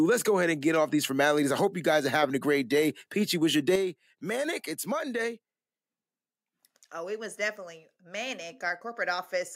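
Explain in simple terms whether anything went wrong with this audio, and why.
Yes, something went wrong. At 3.76 s, right after "was your", the speech suddenly gets noticeably quieter and stays that way to the end of the clip. The background noise drops at the same instant, so the whole recording turns down at once rather than the talker simply speaking more softly. This is a sudden gain jump. The likely cause is a volume setting that was applied instantly, from one sample to the next, instead of being faded in smoothly.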